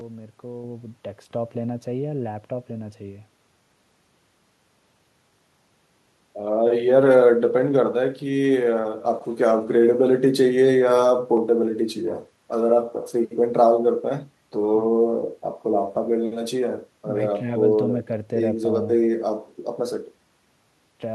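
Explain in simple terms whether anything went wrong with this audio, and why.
Nothing went wrong with this recording of speech. Listening through it, there are no glitches, dropouts or other technical problems to point to at any moment.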